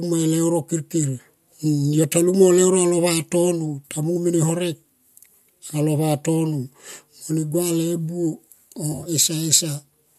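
From 8.92 to 9.09 s, AAC frame loss with concealment: scattered frames dropped and the decoder refilled them from prior spectra, leaving a smeared, phasey, noisy patch.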